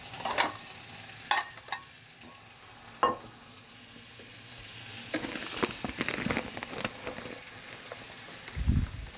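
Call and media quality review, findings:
No technical faults found; the everyday-sound recording shows no audible defects in level, timing, continuity or frequency content.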